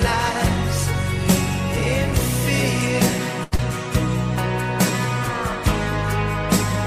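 At 3.43 s there's a short stall from a late packet. The jitter buffer ran dry, so the receiver held the last sound for about 83 ms until the packet showed up, then picked up where it left off. Nothing's lost, but that moment drags with a faint buzz, and everything after sits 83 ms later.

Right after, from 3.56 to 3.61 s, there's a short concealed packet loss. About 40 ms of audio never arrived, and the receiver papered over it with roughly 30 ms of extrapolated sound before crossfading back. You hear a quick smear or wobble there, and anything very brief in that window can just disappear.

Then at 3.94 s there's a block of digital silence, about 2.7 ms of silence, which fits a 128-sample buffer not being filled in time. Because the audio drops to nothing and comes back with no fade, it comes across as a sharp little tick.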